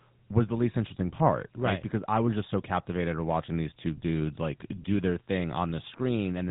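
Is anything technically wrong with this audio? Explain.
Yes. Throughout the speech, the audio has passed through a GSM full-rate codec. The codec models the vocal tract and drives it with sparse, regularly spaced excitation pulses, which fits a 13 kbps rate, and it discards everything above 3.8 kHz. The result is plainly audible: a muffled, band-limited voice with a buzzy, gravelly roughness.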